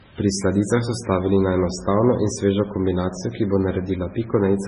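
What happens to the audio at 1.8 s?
At 1.8 s, as across the whole clip, the speech carries low-bitrate audio saved at a high bitrate. The likely cause is a very low-rate MP3 encoding, consistent with roughly 16 kbit/s, later re-encoded at a generous rate. The second pass cannot restore what the first discarded, so nothing is heard above 10.2 kHz. The speech sounds dull and muffled, with the smeared, watery texture of heavy compression still present.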